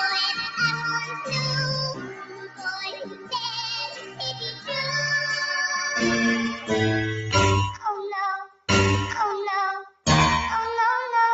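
A noise suppressor built for speech was left on across the whole clip, treating steady parts of this sound as noise. Sustained tones and tails get pulled down while attacks slip through, so the level pumps and thins, swinging by roughly 10 dB.

The clearest cuts by the noise suppressor land at 1.0–1.32 s (about 7 dB down), 1.94–3.36 s (about 15 dB), 3.87–4.7 s (about 12 dB), 8.39–8.68 s and 9.83–10.06 s (both about 16 dB). Held or decaying material sinks in level or has its decay clipped short.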